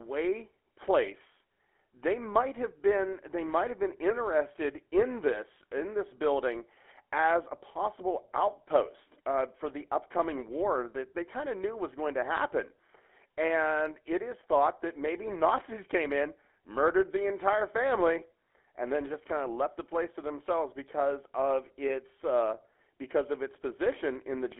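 GSM full-rate codec damage runs from start to finish, plainly audible across the whole speech. This early mobile codec imitates the vocal tract with a filter and drives it with a sparse, evenly spaced pulse train, throwing away most of the excitation detail. The result is a buzzy, gravelly roughness on the voice, consistent with the 13 kbps full-rate coder. The band is held to roughly 300 Hz to 3.4 kHz, leaving the speech thin and boxy.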